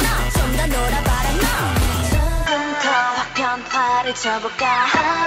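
At 2.46 s the system likely switched its input to a poorer device, and that path carries the rest of the clip. The new device cuts everything above 7.6 kHz, so the sound loses its air and turns duller from that moment, with no gap at the changeover. Loudness stays roughly the same, but a faint new background noise appears, sitting well below the signal and marking the second device's own floor.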